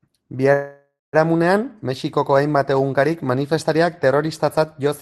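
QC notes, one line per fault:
0.53–1.15 s, call audio freeze: sound stops advancing and the last moment trails on as a fading buzz, ending in about 0.19 s of silence, likely from delayed packets draining the jitter buffer; playback then resumes where it paused, nothing lost, everything after sitting about 0.6 s later.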